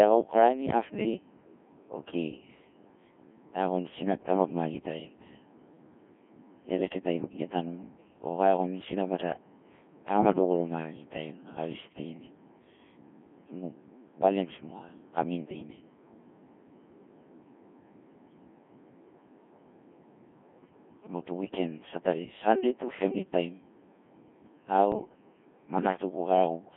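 Codec 2 vocoder throughout: the speech is rebuilt from pitch, voicing and envelope parameters, at a rate that fits about 1.6 kbit/s, so it sounds heavily robotic and buzzy, confined to 200 Hz to 3.4 kHz. Bit errors on digital voice radio from 24.92 to 25.09 s: a few percent of flipped bits corrupt the frame parameters, consistent with about three frames hit, so pitch, level and tone lurch into warbling gibberish.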